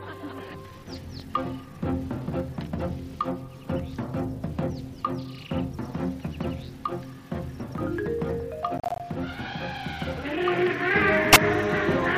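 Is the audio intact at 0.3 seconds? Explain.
Yes, the audio is intact at 0.3 seconds, with no dropout, click, distortion or other fault to be heard there.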